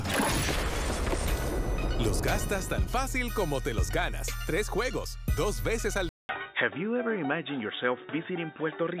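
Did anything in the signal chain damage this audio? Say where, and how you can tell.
Yes. At 6.09 s there's a 200 ms gap, then the sound turns boxy with nothing above 3.8 kHz and a faint new noise floor, at a similar level, through to the end. That's likely an input switched to a poorer device at the driver level.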